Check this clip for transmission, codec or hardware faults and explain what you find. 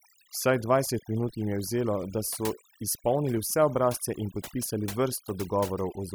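Two faults are audible in this speech clip.

Overdone noise removal, throughout: the background drops into near-silent gaps sprinkled with twinkling specks, because bands near the estimated noise floor are suppressed along with quiet speech.

Clock drift buffer slips, from 0.25 s to 5.47 s: a regular click recurs every 1.04 s, likely from two mismatched device clocks, off by a few hundred parts per million, dropping or repeating a small block of samples.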